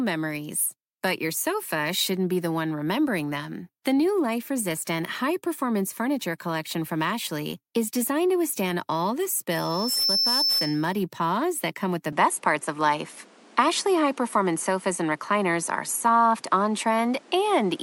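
A speech recording with loudspeaker feedback squeal from 9.50 to 11.00 s: a 5.3 kHz tone swells over about half a second to roughly 5 dB above the speech, a bright horizontal line on a spectrogram. At 12.12 s, with no gap, the sound turns duller and shifts in level by around 5 dB, likely an input switched to a poorer device. From there to the end, the spectrogram is empty above 11.4 kHz over a new noise floor about 30 dB down.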